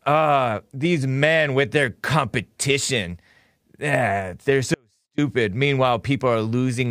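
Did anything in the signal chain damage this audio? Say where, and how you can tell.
Yes. An audio dropout to a faint residue runs from 4.74 to 5.18 s. The speech cuts off abruptly for about 440 ms. The gap isn't silent: a faint leak of the signal remains, roughly 40 dB below its normal level, and then speech snaps back in mid-flow. The sharp edges rule out a natural pause or fade. This most likely happened in the analogue wiring, such as a connection that briefly lost contact while the path after the break stayed live.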